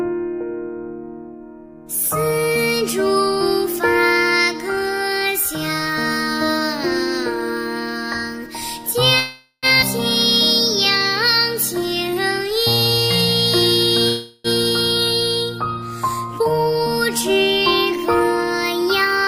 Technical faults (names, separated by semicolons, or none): call audio freeze; skip ahead; jitter buffer slow-down; jitter buffer speed-up